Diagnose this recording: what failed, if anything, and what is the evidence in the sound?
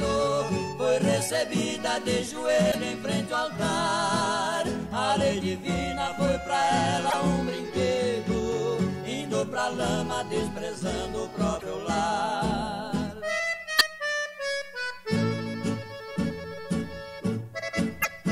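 Short glitches break into the sound at 2.68–2.75, 7.07–7.14, 11.56–11.63, 13.76–13.81 and 17.99–18.06 s, each about 60–70 ms. This is damaged data in a compressed stream: corrupted frames make the decoder misread them and lose sync until the next valid frame header.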